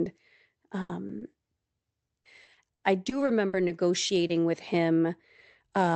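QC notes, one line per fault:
0.81–0.91 s, burst of packet loss: About 80 ms of consecutive audio failed to arrive in time, so the receiver continued the last sound and turned it down across the gap. A voiced segment becomes a held buzz and an unvoiced one a fading hiss. When real packets return, the speech resumes further along, and the 80 ms in between is gone rather than delayed.
1.07, 1.19, 4.07 and 4.27 s, short concealed packet loss: At each point about 20 ms never reached the decoder in time. The receiver extrapolated from the preceding pitch, or from shaped noise where the sound was unvoiced, then crossfaded back into the real signal. Each one is heard as a brief smear or wobble, and a short consonant at that spot can drop out entirely. The events come in pairs about 0.12 s and 0.2 s apart.
2.07–3.71 s, repeated packet loss (robotic sound): Nine separate gaps fall within this 1.6 s stretch, the longest about 60 ms, for about 260 ms concealed in total, roughly a sixth of the span. 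Each patch continues the last sound, and the next gap arrives before the speech settles. The repeated patching gives a choppy, robotic texture with fragments missing. The audio band tops out at 8 kHz, consistent with an Opus call link at around 32 kbps.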